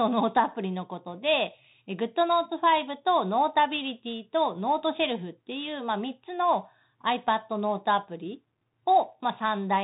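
From start to finish the speech carries the Bluetooth CVSD headset codec: nothing passes above about 3.8 kHz, s sounds turn scratchy, and a granular hiss sits underneath. The one-bit delta coder, consistent with a 64 kbps link, can't track steep waveforms. That grit separates it from a clean low-pass.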